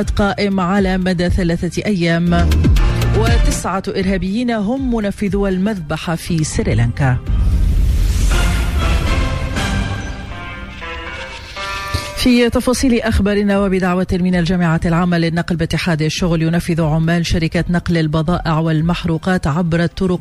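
Nothing stood out on listening; no audible problem turned up anywhere in the recording.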